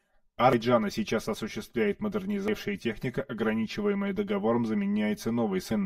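Throughout the speech, channel delay (comb filtering) colours the sound: one channel runs around 5 ms behind the other, and summing them to mono cancels shared content at evenly spaced notches starting near 100 Hz, leaving a hollow, phasey tone.

Damaged data in a compressed stream produces three short glitches: at 0.53 to 0.56 s, just before "сейчас осуществляет"; at 2.48 s, just after it; and at 5.71 to 5.74 s. Each time the decoder misreads corrupted frames and loses sync until the next valid header.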